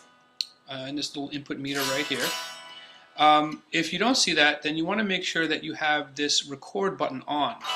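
Nothing here jumps out as a technical fault; the audio just runs along without any glitch, dropout or disturbance to point to.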